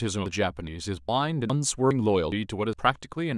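At 0.26, 0.67, 1.08, 1.50, 1.91, 2.32 and 2.73 s the speech skips forward. This is audio missing between chunks. About a tenth of a second vanishes each time, with the edges joined directly. The likely cause is half-second chunks losing audio at each handover.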